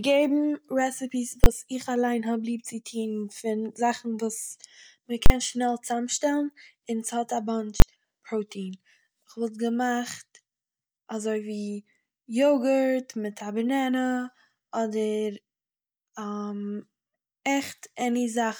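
At 1.44–1.46 s, 5.26–5.30 s and 7.80–7.82 s, invalid numbers at full scale appear. A calculation produced invalid values that pinned each 20 or 40 ms block to maximum output. Each block is heard as one loud bang, and unlike clipping, no speech survives underneath.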